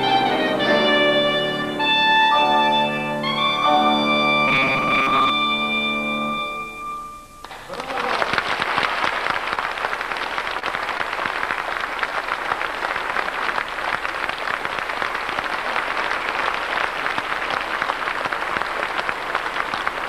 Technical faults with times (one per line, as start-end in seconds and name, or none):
4.48-5.30 robotic sound from repeated short buffers
10.59-10.65 short stall from a late packet
10.98-11.03 short stall from a late packet